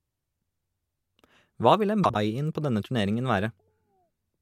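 From 2.03 to 2.16 s, frames out of order: two neighbouring 52.2 ms blocks were decoded swapped, producing a garbled flutter.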